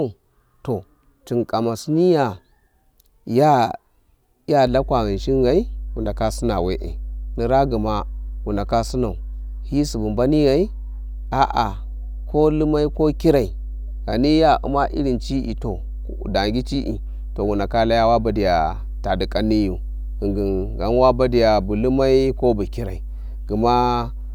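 From 4.67 s to the end, a steady low 50 Hz tone with a few low harmonics sits under the speech, fairly prominent at roughly 10 dB below it. This is mains hum: a ground loop or nearby transformer is coupling the power line into the signal.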